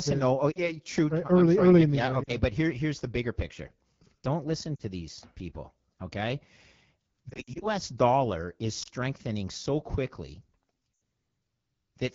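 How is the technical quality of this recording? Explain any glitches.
The quality is poor. Coding damage runs throughout, and the speech breaks up repeatedly.

The AMR wideband (HD Voice) codec sounds rough and raspy from start to finish, which points to a low rate near 8.85 kbit/s. On a spectrogram, the detail above 6.4 kHz is smeared into noise.

Lost AMR speech frames cause a brief dip or warble where a single frame goes, and drops toward near silence where several go in a row, at 0.51–0.69, 2.23–2.32, 4.76–4.83, 7.30–7.68, 8.83–8.88 and 10.95–10.98 s. The decoder repeats its last settings at falling gain, so each waveform shows a brief sag. The 7.30–7.68 s stretch is the worst, with gaps scattered over 320 ms.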